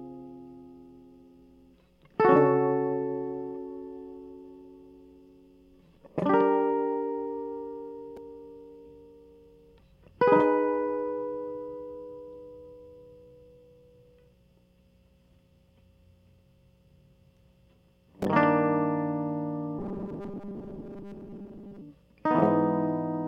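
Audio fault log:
19.79–21.82 s, robotic sound from repeated short buffers: for about two seconds the music collapses into a rigid, metallic buzz pitched at 200 Hz, loosely tracking the original's shape. The likely cause is fresh audio arriving too slowly, so playback fills the gaps by looping a tiny slice, around 5 ms, over and over, with most of the real signal skipped. Unlike a stutter, whose longer repeats are heard as separate echoes, the fast loop fuses into a steady fixed-pitch tone.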